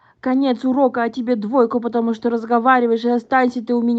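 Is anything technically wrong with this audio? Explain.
No, the speech signal shows no technical faults, with nothing in its level, continuity or frequency content that points to a problem in how it was captured or carried.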